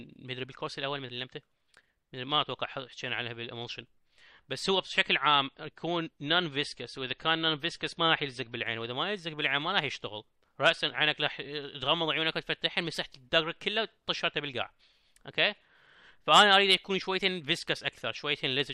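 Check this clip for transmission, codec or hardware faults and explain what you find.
One transmission fault is present, an adaptive stream switching to a lower bitrate. From 4.63 to 8.63 s the stream fell back to a cheaper encoding, which fits a step from roughly 128 kbit/s MP3 down to about 40 kbit/s. Everything above 12.2 kHz vanishes, the top end turns dull, and compression artefacts rise, with abrupt, gapless changes at both boundaries.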